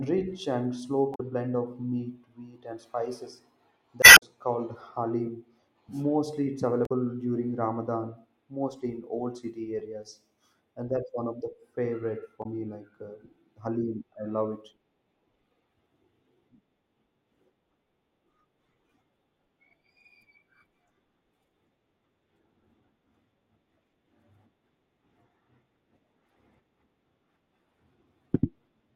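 Damaged data in the compressed stream makes the decoder misread frames and lose sync while it hunts for the next valid header. In this speech, that produces brief chirps or blips at 1.12–1.21 s, 4.00–4.23 s, 6.83–6.92 s and 12.40–12.46 s.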